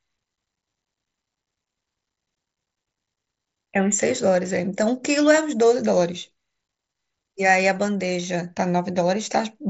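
Speech over what sounds like the mSBC Bluetooth headset codec, band-limited at 7.7 kHz as that wideband path should be, with no technical faults.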